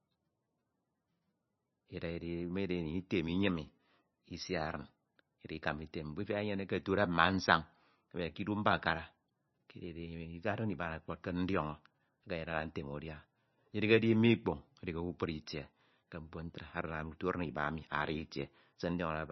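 From start to end the speech is band-limited, with nothing above about 5.9 kHz. The treble is missing and s sounds are dull and thin. Faint parts of the spectrum flicker in and out, giving a watery, swirly texture, and attacks are smeared. This is heavy damage, most likely from MP3 compression at a very low bitrate, perhaps around 24 kbps. Short of bits, the encoder cut the top band and dropped weak frequency lines frame by frame.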